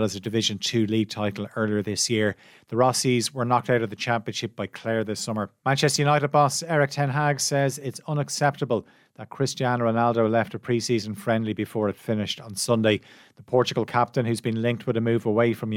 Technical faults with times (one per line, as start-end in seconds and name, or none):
none